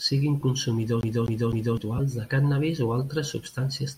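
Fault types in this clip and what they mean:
Lost LE Audio frames: 20 ms gaps near 0.41 s and 1.97 s, consistent with two 10 ms frames dropping over the Bluetooth LE Audio link. The LC3 decoder fills each gap by repeating the last spectrum with randomised signs, so the speech briefly smears into noise.
CD stuck on one turn: From 1.01 s to 1.77 s, just before "de cànnabis o altres", the same 255 ms stretch of speech plays three times. Each jump back has a brief mute, producing the fast, even stutter of a scratched disc skipping a track.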